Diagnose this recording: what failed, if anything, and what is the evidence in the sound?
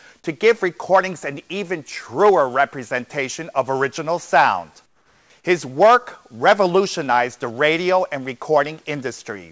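From 4.86 to 5.30 s, a stretch of about 440 ms, the real background is replaced by comfort noise: a steady, featureless hiss about 7 dB quieter than the room sound around it, which itself sits about 39 dB below the loud passages. The likely cause is discontinuous transmission in the call processing. The sender stopped sending audio during a pause and the receiver filled the gap with synthetic noise. On a spectrogram the textured background turns into a smooth, uniform band, capped at 8 kHz like the rest of the call audio, which fits a wideband G.722 path. On a waveform it shows as a flat, lower noise floor with a clean step at each end.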